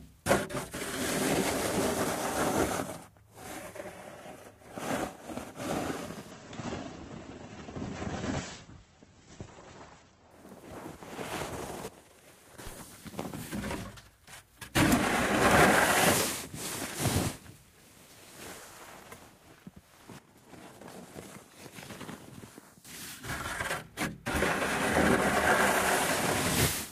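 From 6.31 to 10.31 s the audio drops abruptly to an adaptive stream at a lower bitrate. Nothing above about 8.1 kHz survives, and the remaining sound takes on a smeared texture, which fits a switch from a comfortable Opus rate to one near 12 kbit/s. Unlike a dropout or a buffering stall, there is no gap. The quality simply changes at both edges and then snaps back to full bandwidth.

At 11.88 s the level falls by about 13 dB in one step, and it jumps back up at 12.58 s. From 20.19 to 22.85 s the same thing happens with a drop of about 12 dB. Each time, the sound and its background noise move together, with no ramp. That instant, uniform step points to a sudden gain jump, likely an unramped digital gain change. A fade or compressor action would glide or breathe instead.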